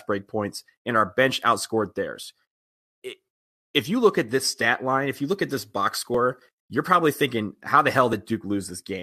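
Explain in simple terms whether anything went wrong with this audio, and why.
Two things went wrong in how this speech was delivered and played back.

First, an overlap between stream segments. The audio travels in pieces about 2 seconds long, and at some joins the timing labels of neighbouring pieces overlapped. The player trimmed the overlap, but that sound wasn't actually repeated, so a sliver of real audio was thrown away. You hear a tiny click or skip at 2.16 s, right after "and our bench outscored", again at 6.15 s, and at 8.13 s, just after "how the".

Second, pre-emphasis left on. During recording or transmission the treble was deliberately turned up, in the way CD audio can be, on the understanding that playback would turn it back down. Here that correcting step was skipped. From 5.28 s, after "stat line if you", until 7.26 s, just before "how the", the high end is noticeably too strong, so the voice sounds thin, overly bright and hissy on its s sounds.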